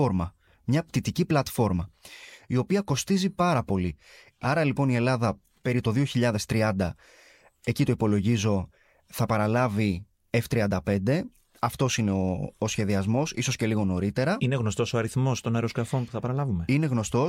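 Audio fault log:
No audible faults detected.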